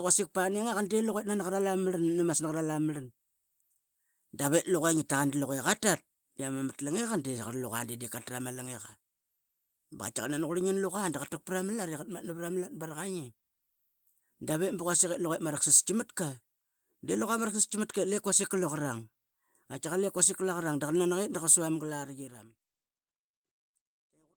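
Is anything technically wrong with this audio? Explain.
No, nothing technically wrong can be heard in this speech. The ending is a smooth fade-out that begins at around 21 s and brings the level down gradually, without a click or hard edge.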